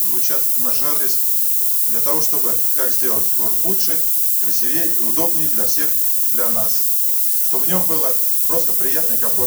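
Low bit depth with noise shaping affects the audio throughout. At 3 bits, rounding error sits only about 15 dB below the signal, pushed upward as a steady, thin hiss. A spectrogram shows a noise floor climbing steeply toward the top band, and the waveform shows coarse, stepped levels.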